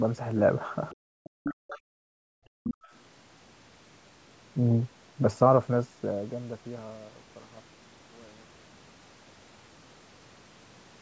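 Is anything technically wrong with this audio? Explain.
Yes, the first three seconds of this speech show echo-canceller trouble on a speakerphone call.

Other side's voice leaking through, at 0.91 to 0.96 s, 1.24 to 1.79 s and 2.64 to 2.92 s. A second voice sits under the talker, most likely loudspeaker output picked up by the microphone and not fully removed by the echo canceller. The first scrap is faint, about 30 dB below the speech, but the two later stretches are only about 10 dB down.

Background gated by the echo canceller, at 0.96 to 1.23 s and 2.03 to 2.86 s. Each time the loudspeaker plays, the canceller clamps the microphone, and the room sound drops by up to about 31 dB before returning. The first hole lasts roughly a third of a second, the second about 0.7 s, so the background seems to switch off and on. The band-limited tone, with nothing above 8 kHz, comes from the call's microphone path.

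Speech suppressed in double talk, at 1.51 to 1.75 s. Here both sides overlap, and the canceller, likely unable to tell the talker from the echo, pushes everything down by around 40 dB. For about 150 ms the talker's voice is pulled under, right inside the longer leakage stretch. The near voice is turned down while the far one carries on.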